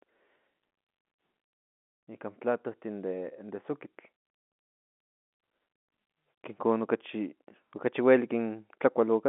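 No technical faults can be heard in this speech.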